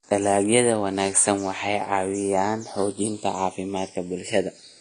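Channels drifting apart runs throughout the speech. The two channels were captured on separate clocks that disagree by around 150 ppm, so the delay between them creeps up to roughly half a millisecond by the end. Summed to mono, the resulting comb notches sweep slowly through the spectrum, heard as a slow flanging.

AAC compression, also present throughout, is the likely cause of a plainly audible dull, smeared quality with nothing above 9.8 kHz. A low bitrate, which fits about 32 kbps for AAC-LC, forced the encoder to drop the top of the spectrum and quantise the rest coarsely.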